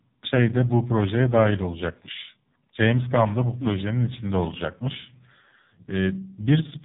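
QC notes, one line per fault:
Throughout, AMR narrowband mobile codec: nothing above 3.8 kHz survives, and the heavily buzzy, synthetic speech fits AMR-NB's lowest modes, around 5 kbps.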